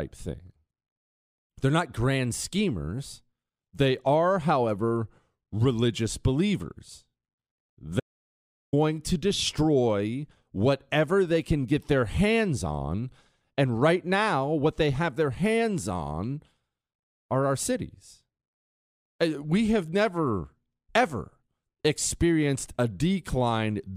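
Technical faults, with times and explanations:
8.00 to 8.73 s, audio dropout to silence: the speech stops mid-flow and the signal falls to silence for about 0.73 s, then resumes abruptly. The likely cause is the input being lost, through a dropped link, a disconnected device or a brief mute, while recording carried on. A natural pause or a noise gate would leave faint room tone or a gradual fade. Here the background vanishes completely and the speech from that stretch is missing.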